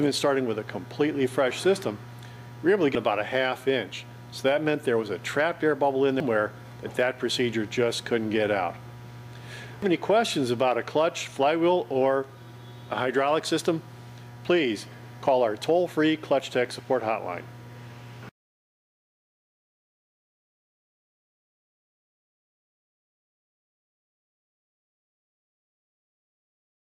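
At 2.95, 6.2 and 9.82 s, brief blips break the sound. Each comes from damaged data in a compressed stream. Bytes there are wrong, so the decoder misreads those frames. It loses sync and hunts for the next frame header.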